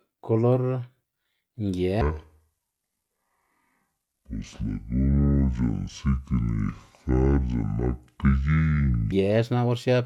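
From 2.01 s to 9.12 s the speech plays at the wrong speed, about 0.56 times normal. Pitch drops roughly ten semitones, so the speech turns deep and slow, likely from a wrong playback clock.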